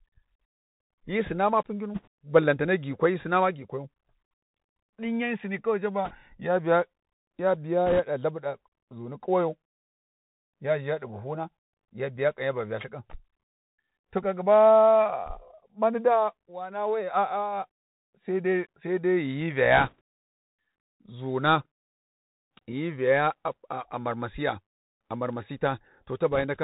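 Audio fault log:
throughout: Bluetooth CVSD headset codec. The speech is carried as a single up-or-down bit per sample at 64 kHz, with a step size that adapts to the signal, so nothing above 4 kHz survives and the sound is narrow and boxy. Loud high-frequency moments outrun the step and distort, s sounds come out scratchy, and a grainy hiss sits under the speech for the whole clip.
1.94–2.08 s, 6.05–6.13 s, 7.86–8.00 s, 19.77–20.01 s, 26.32–26.44 s: bit errors on a Bluetooth voice link. Each burst gives a short rushing crackle. The first falls between "hyi sina ma pugginu" and "balantane gikwai hyi sina", and the second comes just before "ya biya". Since every CVSD bit carries equal small weight and errors decay, there are no sharp clicks, only noise. The 6.05 s burst is the harshest, with an error rate of around 4 percent. The 26.32 s burst is the mildest, at about 1.5 percent.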